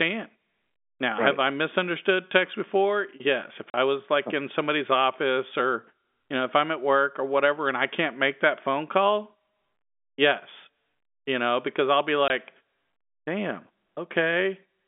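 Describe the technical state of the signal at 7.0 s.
At 7.0 s the speech is intact, with no fault, only the narrow telephone band of the G.711 coding, which passes roughly 200 Hz to 3.6 kHz.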